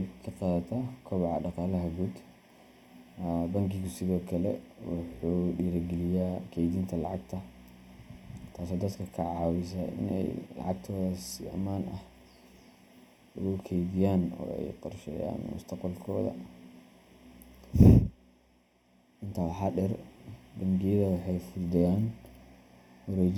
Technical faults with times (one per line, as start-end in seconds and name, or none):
0.00-23.37 channel delay (comb filtering)